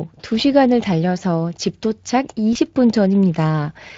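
Throughout, the speech carries plainly audible Speex codec coloring, a hoarse, noisy CELP texture that fits a bitrate around 20.6 kbps starving the excitation. From 2.53 to 2.57 s, VoIP packet loss concealed by the speech codec appears. About 20 ms went missing, which points to a single lost frame. The decoder extrapolates a brief smear from the last pitch and filter, and the voice stays weak or distorted for tens of milliseconds after packets return.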